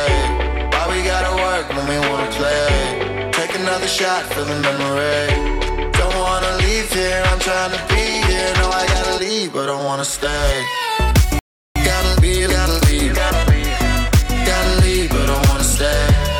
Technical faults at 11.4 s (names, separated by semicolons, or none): playback stall